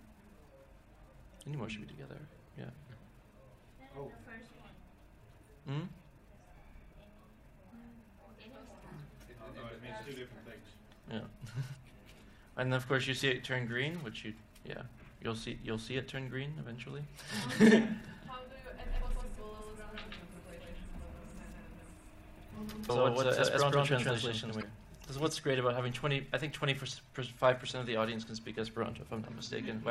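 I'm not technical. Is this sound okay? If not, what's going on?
No. At 11.73, 17.63, 22.86 and 24.59 seconds there are brief chirps or blips, each lasting a fraction of an instant. That is damaged data in a compressed stream: the player hits broken data and loses its place.

From 18.87 to 25.29 seconds you hear a doubled audio track. The same sound plays twice, with a copy about as loud trailing roughly a sixth of a second behind. It is likely caused by the audio being captured twice or an editing mix-up. Unlike a real echo, it doesn't fade, has no room sound, and starts and stops abruptly.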